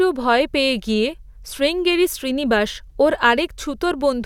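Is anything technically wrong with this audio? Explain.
No, nothing in this speech recording stood out as technically wrong when listening to it.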